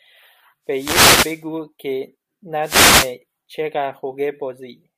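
Two short bursts of static swish across this speech clip, from 0.69 to 1.45 s and again from 2.62 to 3.15 s. These are wireless microphone noise hits: the analogue FM radio link faded as reflected signals cancelled, letting receiver noise surge up.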